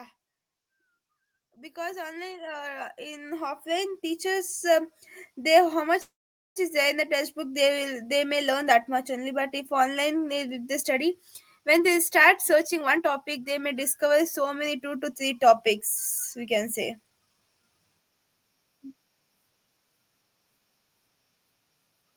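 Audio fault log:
1.36 to 10.75 s: automatic gain rising. Level and background noise swell together by about 18 dB over nine seconds, a slow climb rather than a sudden jump.
6.01 to 6.58 s: call audio freeze. The sound is held as a fading buzz or hiss, then about 0.46 s of near silence, then resumes with nothing skipped, likely from delayed packets emptying the jitter buffer.
11.58 to 15.75 s and 16.37 to 17.79 s: jitter buffer speed-up. Audio runs about 10% and 9% fast at unchanged pitch, hurried rather than chipmunk-like, trimming roughly 0.4 s and 0.15 s of built-up delay.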